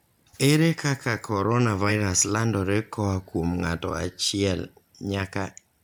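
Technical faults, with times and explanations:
1.88 to 1.91 s, compressed frames skipped: The speech jumps forward just before "landore koa kuom ng'ato", losing about 50 ms of audio. Whole coded frames were missing or rejected by the decoder.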